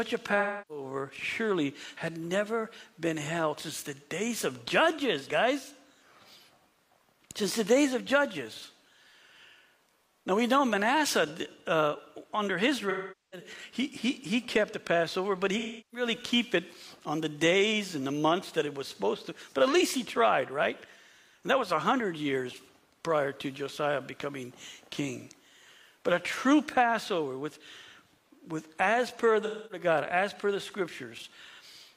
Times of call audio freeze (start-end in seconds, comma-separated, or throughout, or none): none